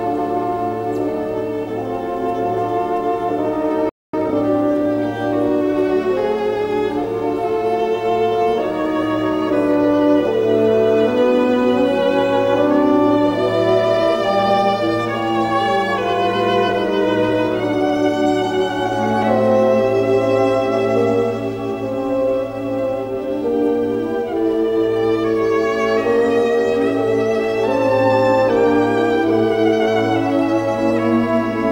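At 3.89 s the sound stops dead in mid-flow and stays silent until 4.14 s, a gap of about 240 ms. This is a playback stall, the player likely running dry of data or having its output thread blocked, so nothing reaches the output until it recovers.

From 4.14 s to 4.38 s the player works off the backlog left by the stall through time-compressed catch-up, running at twice normal speed for that quarter-second. It gets there by cutting out short segments and cross-fading across the joins rather than by speeding up the playback rate, so the pitch stays where it was. The passage sounds hurried.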